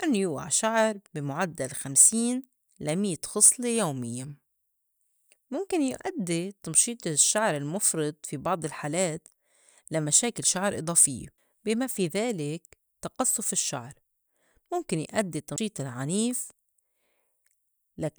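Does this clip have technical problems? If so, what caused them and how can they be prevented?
Yes. Two CD skips occur in this speech clip: at 11.38 s, after "لمشاكل شعر إضافيّة" and before "بي ما في ذلك", and at 15.56 s, after "مُمكن يأدي". The laser jumped tracks, muting briefly (a few milliseconds, then about 15 ms) before resuming elsewhere. Prevent this by ripping from clean discs with an error-correcting ripper on a stable drive.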